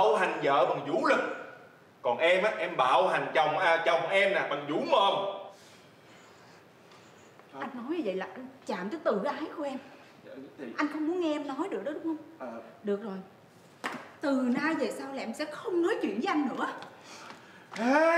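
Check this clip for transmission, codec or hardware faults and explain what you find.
Nothing here points to a transmission, codec or hardware problem, so there's nothing to flag in this one.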